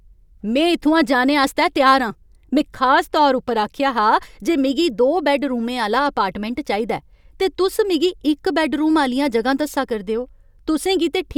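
No technical faults can be heard anywhere in this speech recording. No point in it needs a timestamp or an explanation.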